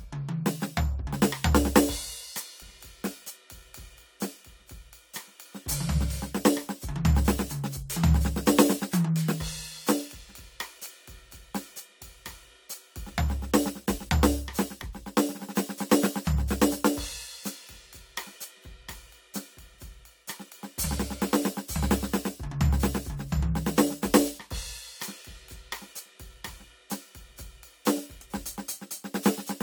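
Corrupt frame decoded at 14.79 to 14.83 s and again at 24.4 s in this music clip: damaged compressed frames, a couple each time, were played anyway, misplacing energy as short noisy blips, the second quieter.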